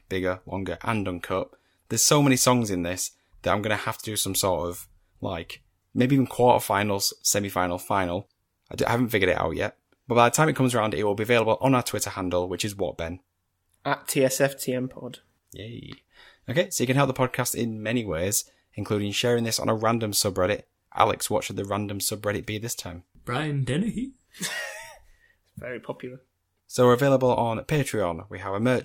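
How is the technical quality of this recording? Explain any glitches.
No technical faults can be heard anywhere in the speech recording; the signal stays continuous and stable throughout.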